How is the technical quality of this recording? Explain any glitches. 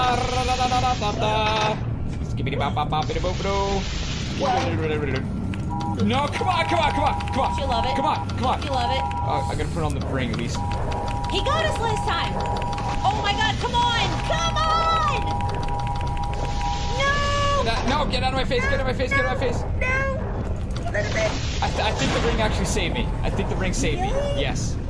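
No glitches or technical faults can be heard anywhere here.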